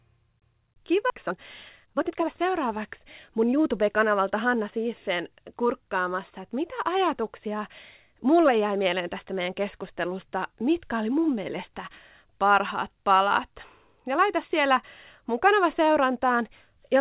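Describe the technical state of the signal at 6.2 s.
At 6.2 s the speech is intact, with only the steady narrowband sound of a telephone-style call path that carries nothing above 4 kHz.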